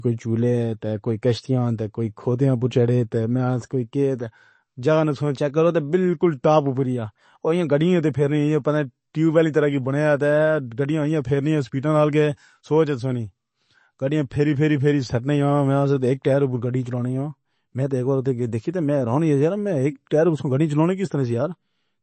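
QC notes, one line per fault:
Throughout, MP3 compression: nothing comes through above 8.3 kHz, so the top end sounds dull, and the damage is plainly audible, with a watery, swirly texture on the speech and smeared consonant attacks. The likely cause is an MP3 encoder short of bits, which chops the treble at a fixed point and keeps dropping weak frequency detail frame to frame. The depth of the damage fits a low bitrate of around 32 kbps.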